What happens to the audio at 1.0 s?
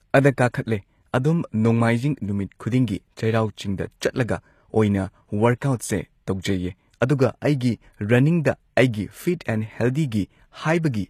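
At 1.0 s the speech has gritty, metallic sibilants and a treble that sounds bright but synthetic, with nothing above about 14.9 kHz, and this continues through the whole clip. The likely cause is HE-AAC compression at a rate consistent with 24 kbps, where the upper band is rebuilt by copying lower bands upward instead of being coded.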